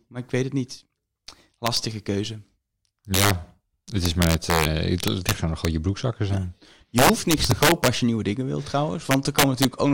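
Speech, hit by integer overflow at 1.67–1.77, 3.14–3.31, 4.06–4.65, 5.04–5.65 (before "je broekzakken zijn"), 6.98–7.88 and 9.11–9.65 s: peaks driven about 1–6 dB past full scale wrap to the opposite sign, causing harsh cracks, seen as rail-to-rail flips in the waveform and bright vertical streaks on a spectrogram.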